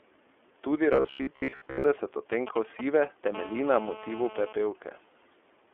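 From start to finish the speech passes through the iLBC codec. The band runs from about 300 Hz to 3.4 kHz, and nothing remains above 3.4 kHz. The codec damage is plainly audible: voices sound slightly rough and synthetic, which fits the 13.33 kbps mode with 30 ms frames, each coded on its own. On a spectrogram the whole clip shows a hard ceiling at about 3.4 kHz, with blank space above it and a thin empty strip at the bottom.

From 0.93 to 1.84 s the speech turns into a rigid metallic buzz at 66.8 Hz that still roughly follows the syllables. This is robotic sound from repeated short buffers. The likely cause is late-arriving audio, covered by looping the last chunk of about 15 ms while most of the real material is skipped. A spectrogram shows evenly spaced horizontal harmonics of 66.8 Hz. The waveform shows the same short shape copied over and over.

From 2.32 to 3.28 s a galloping dit-dit-dit of short buzzes appears, roughly 10 dB below the speech. 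These are GSM signalling bursts. A nearby 2G phone is exchanging short radio bursts with the network, and the audio circuitry rectifies them into sound. On a spectrogram they appear as clustered vertical stripes with a 216.7 Hz harmonic comb. The waveform shows groups of sharp pulses separated by gaps.

From 3.35 to 4.53 s a steady, hard, raspy buzz at 216.7 Hz sits under the speech, about 16 dB down and unrelated to it. This is GSM phone buzz from a handset in a call, transmitting its burst train continuously, which the circuitry demodulates. A spectrogram shows a dense ladder of harmonics at multiples of 217 Hz, continuous across that span and reaching up to the band limit. The waveform shows a regular pulse train at 4.6 ms intervals.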